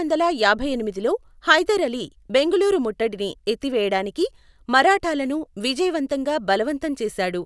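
No technical faults are audible anywhere in this speech recording.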